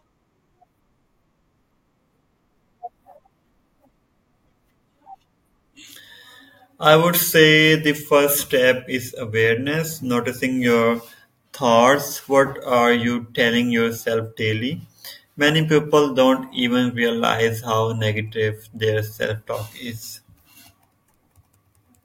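No technical faults can be heard anywhere in this recording.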